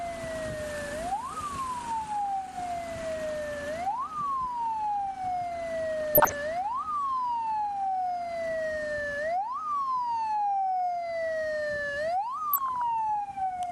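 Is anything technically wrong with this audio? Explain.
Yes. DAB burbling occurs at 6.01–6.34 s and again at 12.53–12.82 s. Bit errors from weak reception slipped past error correction into the MP2 data, around half a percent in the first patch and less in the second, corrupting samples and leaving brief noise blips in individual sub-bands.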